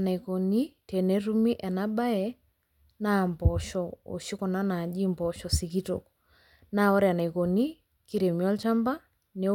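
At 7.20 s a single sample jumps out of line, peaking at about -30 dBFS, then the waveform returns to where it was. This is a bit error spike: one flipped bit in memory or on a digital link shifts that sample by a power of two. It registers as a brief, broadband tick with no relation to the speech around it. A second spike at 8.63 s, about -24 dBFS, gives a louder tick.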